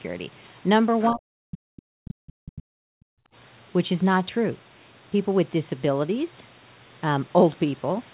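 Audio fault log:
1.01–1.07 s and 1.76–1.81 s, other side's voice leaking through: brief, faint scraps of a second voice sit well below the main speech, each lasting only a few hundredths of a second. This is likely loudspeaker echo that the echo canceller left uncancelled in the microphone signal.
1.10–3.08 s, speech suppressed in double talk: over about two seconds the speech sinks and breaks up, at its worst dropping very deeply toward silence. This is likely the echo canceller clamping down while both sides talked at once, unable to tell the talker from the echo.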